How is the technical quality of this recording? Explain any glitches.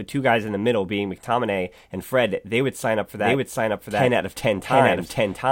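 The recording has one clear glitch, a doubled audio track. From 3.17 s to the end, a second full-band copy of the speech trails the original by about 0.7 s at roughly equal loudness, cutting in abruptly with no room colour or decay. It is likely a second capture path or misaligned edit mixing in a delayed duplicate.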